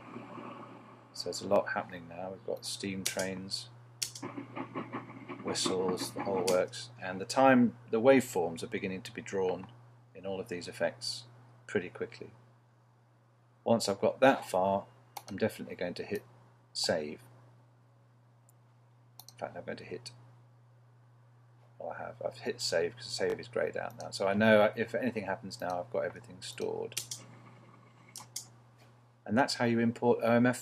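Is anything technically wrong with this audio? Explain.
Yes, there are two spots of repeated buffer. At 1.56–1.58 s a short slice plays twice, and at 23.3–23.34 s one plays three times. New audio arrived late, so the device replayed its last chunk, which fits a 20 ms buffer. Each repeat is a hard-joined little stutter or buzz, with nothing apparently lost.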